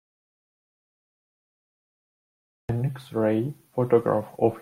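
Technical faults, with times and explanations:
0.00–2.69 s, audio dropout to silence: the clip opens already in a dead gap of silence, with no room tone, hiss or breath beneath it, and the speech only arrives at 2.69 s, starting mid-flow. The cause is likely a lost input, such as a disconnected device or a stray mute, while recording carried on writing silence. Unlike a noise gate or a quiet pause, nothing at all survives in the gap, and the entry is abrupt rather than faded.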